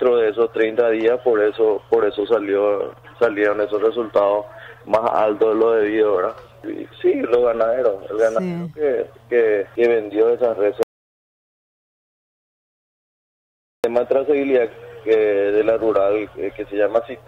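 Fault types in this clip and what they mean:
audio dropout to silence: At 10.83 s the sound cuts to complete silence, with no room tone. It returns at 13.84 s, about 3 s lost, likely from a dropped input connection.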